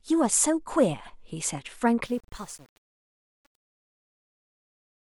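From 2.05 s to the end at 5.13 s, the fade-out of the speech turns gritty and coarse rather than thinning away cleanly. This is truncation distortion on a fade. The gain stage kept too few bits, which fits an 8-bit stage, and applied no dither, so as the level fell the waveform collapsed into a handful of square steps.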